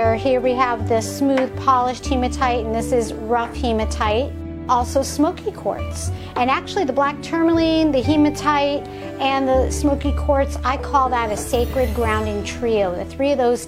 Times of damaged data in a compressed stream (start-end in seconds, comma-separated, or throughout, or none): none